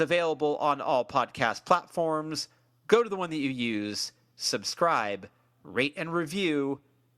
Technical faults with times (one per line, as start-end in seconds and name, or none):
none